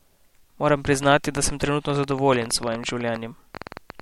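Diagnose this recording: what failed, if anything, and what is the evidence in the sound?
What failed is a train of clicks running from 0.85 s right through to 4.01 s. They tick at about 10.8 per second with uneven spacing, around forty of them, each with much the same sharp shape and peaking roughly 10 dB above the speech, and you hear them in the pauses too. That points to something injecting pulses from outside the audio, likely interference from nearby equipment coupling into the analogue wiring, or a faulty connection or power supply.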